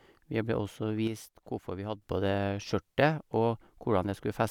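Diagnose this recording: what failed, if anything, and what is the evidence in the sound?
Between 1.07 s and 2.02 s the speech level falls abruptly by about 6 dB and then returns just as suddenly, with no fade at either edge. That step is the signature of one channel dropping out ahead of a mono sum: material common to both channels loses half its contribution, and anything carried only in the missing side vanishes. The hard on/off edges point to the analogue wiring stage, likely an intermittent cable or connector contact.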